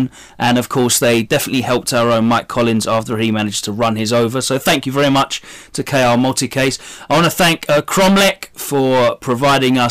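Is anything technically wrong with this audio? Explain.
Yes. Hard clipping runs through the whole speech clip. The signal is driven about 22 dB past what the stage can pass. Roughly a sixth of the samples are cut flat. Those squared-off peaks add high harmonics. Every loud syllable carries a harsh fuzz.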